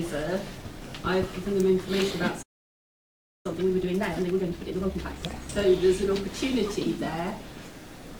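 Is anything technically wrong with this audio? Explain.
Yes. At 2.42 s the audio drops into a playback stall lasting about 1.02 s, until 3.46 s. The player most likely ran out of buffered data or had its output thread blocked. The sound cuts off mid-flow and then resumes, and the waveform shows a flat, empty gap with a blank vertical band across the spectrogram.

From 3.46 to 5.50 s comes time-compressed catch-up at 1.5 times normal speed. The player shortens its backlog by removing small slices and cross-fading the joins, so the sound is hurried but keeps its pitch. The spectrogram shows compressed timing, with harmonics at unchanged heights.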